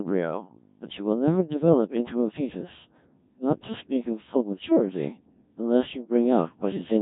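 Throughout, a Codec 2 vocoder rebuilds the speech from pitch, voicing, energy and envelope alone, which fits roughly 1.3 kbit/s: robotic buzz and a waveform unlike the original.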